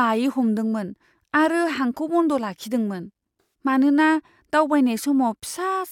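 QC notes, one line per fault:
3.40–3.47 s, AAC frame loss with concealment: a brief smeared, noisy, phasey patch interrupts the speech. The decoder lost a run of AAC frames, about 170 ms' worth, which fits roughly eight frames, and filled the gap by reusing the last good spectrum.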